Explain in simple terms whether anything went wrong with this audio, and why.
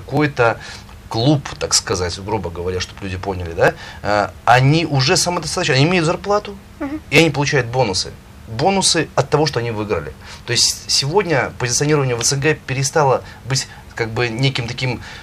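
Clicks every 1.75 s from 0.17 to 14.19 s are clock drift buffer slips, likely from two mismatched device clocks. Their even spacing rules out random dropouts.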